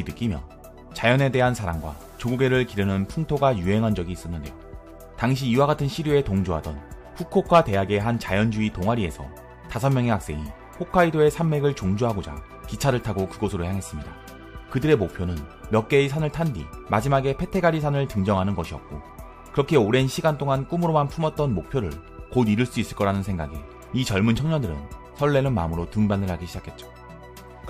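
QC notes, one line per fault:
No faults found.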